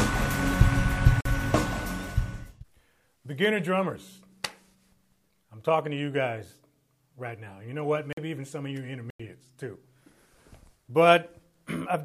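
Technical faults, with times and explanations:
1.21, 8.13 and 9.10 s: block of digital silence; sound cuts out for 46, 46 and 93 ms, fitting one or two 2048-sample buffers, heard as short holes.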